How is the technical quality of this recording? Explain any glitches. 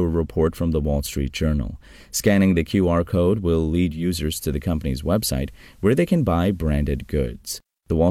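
The recording has one clear fault: digital radio blending to analogue. From 3.85 s, just after "code will", the receiver lost its digital stream and cross-faded over about 0.3 s to the station's FM broadcast, returning to digital at 7.49 s. During that stretch a faint hiss sits well below the speech, and the level drops by about 1 dB, so the audio sounds slightly quieter and noisier until the digital signal takes over again.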